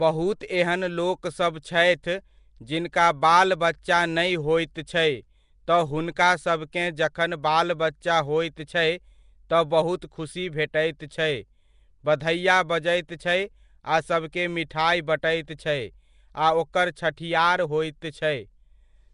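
Throughout, the speech sounds rough and smeared, with a hissy halo and nothing above 10.6 kHz. This is likely Nellymoser compression, starving weak bands of bits and filling them with noise.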